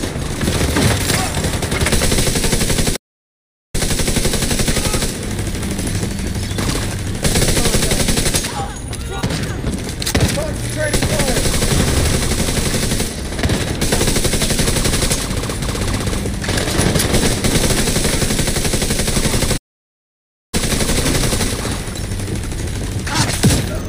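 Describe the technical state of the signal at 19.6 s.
A playback stall runs from 19.57 to 20.54 s: the sound cuts out for about 0.96 s, likely because the player ran short of data, then resumes.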